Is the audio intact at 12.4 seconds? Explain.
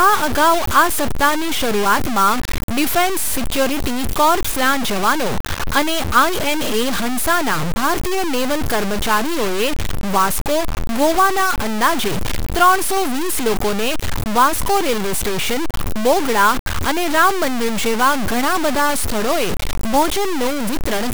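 No. At 12.4 seconds, as across the whole clip, the speech carries the grainy, signal-following distortion of low bit depth without dither. The likely cause is samples truncated to very few levels, consistent with about 4 bits, with no dither to break up the error. The rounding error tracks the waveform and sits only slightly below the speech in level, so quiet passages turn harsh and sputter between steps.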